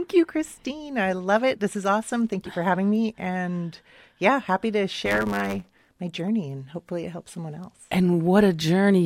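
A speech clip with one stretch of trouble, from about 5.05 to 6.00 s, where you get a block size mismatch (truncated). One stage is handing over longer blocks than the next one reads, so the tail of every block gets chopped off. That shows up as a buzz at 100 Hz, the block rate, and the speech runs about 1.09 times fast while the timbre stays roughly where it should be.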